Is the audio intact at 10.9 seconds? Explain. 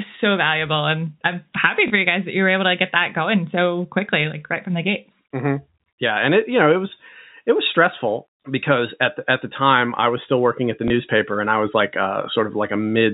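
No. From 10.88 to 10.90 s, between "still working at the" and "and I was like", there is packet loss with the last packet repeated. About 20 ms of audio went missing, which fits a single lost packet, and the receiver filled the gap by replaying the previous packet. This single repeat comes through as a small blip, heard through the narrowband G.711 telephone channel.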